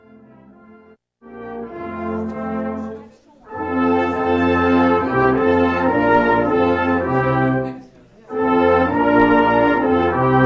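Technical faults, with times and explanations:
No technical faults can be heard anywhere in the audio, and the signal stays intact across the whole clip.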